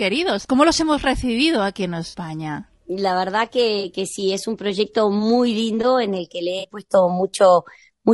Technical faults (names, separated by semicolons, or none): low-delay AAC compression; AAC frame loss with concealment